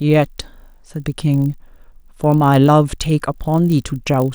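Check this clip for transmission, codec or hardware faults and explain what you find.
One fault runs through the whole speech clip: a 50 Hz buzz present only while sound plays, from the resampler restarted on every block. Each 20 ms block was converted from 24 kHz to 48 kHz in isolation, leaving an error at every edge.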